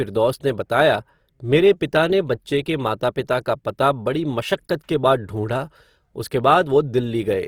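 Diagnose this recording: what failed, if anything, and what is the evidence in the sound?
The failure is at the codec stage: Opus compression, with damage plainly audible across the whole speech clip. The spectrum extends to about 20.4 kHz, so bandwidth has not narrowed, but the upper bands sound grainy and rough, with a noisy texture on sustained sounds rather than the swirling of MP3. This is likely the CELT music mode filling starved bands with folded or noise content, and the artefact level points to a rate around 24 kbps.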